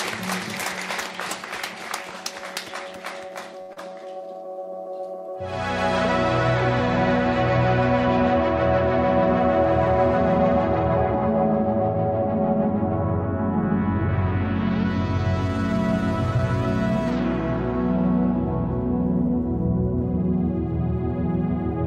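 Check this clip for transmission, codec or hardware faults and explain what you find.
There are transmission faults here, all network-side: a cluster just before the four-second mark and one small event near the end.

The first is a short stall from a late packet, at 3.61 to 3.71 s. A packet missed its slot, the jitter buffer ran dry, and the receiver held the last bit of sound for 75 ms until the data turned up. It then carried on from the same point, so nothing's lost, but the delay grew by 75 ms. You hear a sound hang a touch too long with a faint buzzy sag. The same thing happens in miniature at 16.37 to 16.41 s, a 16 ms hold, barely more than a hiccup.

Right after, at 3.73 to 3.78 s, there's short concealed packet loss. About 60 ms of audio never arrived in time. The receiver bridged the gap with 33 ms of made-up continuation and blended back into live audio, trimming around 30 ms off the delay in the process. 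The result is a quick smear or wobble, and a brief bit of sound can just drop out.

Then, from 3.79 to 4.00 s, there's a jitter buffer slow-down. With its reserve drained, the buffer rebuilt it by repeating tiny slices of the signal, adding 35 ms in total. That stretch plays at about 87% speed with the pitch unchanged, so it sounds slightly drawn out, maybe with a hint of warble.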